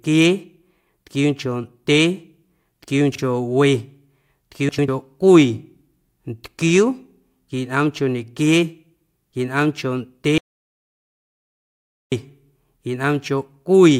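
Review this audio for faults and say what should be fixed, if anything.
Frames out of order occur at 3.12 to 3.19 s and 4.69 to 4.88 s. In each stretch two neighbouring blocks play swapped, 32 ms each in the first and 96 ms each in the second. This fits one and three frames per side. The speech flutters. No time is lost. Sequence numbering checked before decoding would prevent this.

An audio dropout to silence runs from 10.38 to 12.12 s, about 1.74 s. The speech cuts off into silence with no room tone. It resumes mid-flow, and the speech in between is gone. The likely cause is a lost input, a failed link or a stray mute. Monitoring the input and securing connections would prevent this.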